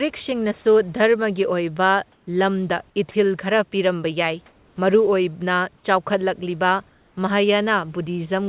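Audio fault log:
2.12–2.27 s, 4.46–4.76 s, 6.89–7.16 s: comfort noise in place of the background. The sender likely switched to discontinuous transmission when it detected no speech, and the receiver filled each pause with synthetic noise. The real room background, about 36 to 39 dB below the loudest speech, is replaced for 150 ms, 300 ms and 270 ms by a smooth, featureless hiss. That hiss is about 1, 2 and 3 dB quieter than the background it replaces, so each pause sounds slightly flatter and dimmer.
3.11–3.14 s: sound dropped by the voice detector. The sender's voice detector likely treated a quiet stretch of speech as background and stopped transmitting, so the receiver substituted comfort noise. Thirty milliseconds of actual speech are lost and replaced by steady noise. The result is a brief hole in the speech that fills with hiss until the detector triggers again. Because the whole call path cuts off everything above 4 kHz, the inserted noise is dull and narrow-band, like the speech around it.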